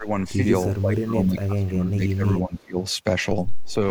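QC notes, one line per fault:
0.0–0.08 s, speech suppressed in double talk: the opening dips by roughly 15 dB for a moment, likely the canceller ducking the talker while the far side spoke.
0.71–2.79 s, speech suppressed in double talk: for about two seconds the voice keeps sinking, by as much as roughly 20 dB, likely the canceller turning everything down during overlapping talk.
2.6–2.64 s, echo leak: a faint scrap of the voice comes back 342 ms late, around 40 dB down, likely loudspeaker pickup the far end's canceller missed.
3.65–3.74 s, echo leak: another brief 342 ms delayed copy, a bit stronger at around 35 dB down, likely the same loudspeaker echo slipping through.
3.68–3.77 s, speech suppressed in double talk: a short dip of roughly 10 dB overlapping that echo, likely the canceller clamping down while both sides were active.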